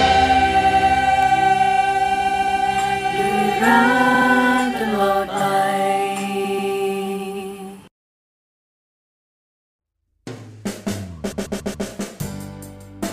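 Repeated frames occur at 0.61 to 0.88 s, 2.18 to 2.60 s, 4.14 to 4.27 s, 6.43 to 6.71 s and 11.31 to 11.87 s. Each time, a short block of encoded frames is played again and again: 92.9 ms three extra times, then 139.3 ms three times, 69.7 ms twice, 139.3 ms twice and 139.3 ms four times. The result is a stutter. Unlike an echo or a dropout, the identical chunk returns intact and the timeline grows longer.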